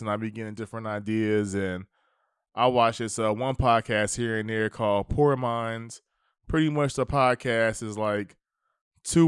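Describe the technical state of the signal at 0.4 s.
At 0.4 s the speech signal is intact, with no audible fault at that point.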